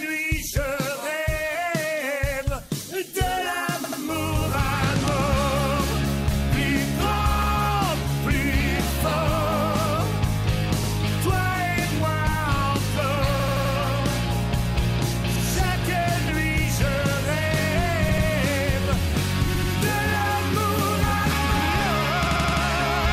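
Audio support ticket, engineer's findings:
Repeated buffer: stutters at 3.84, 7.42, 10.84, 13.40, 18.09, 19.54, 22.27 s. The same 85 ms chunk (fits a 4096-sample buffer) replays one to four extra times with hard joins. Playback device underrun. No silence gap, unlike a dropout.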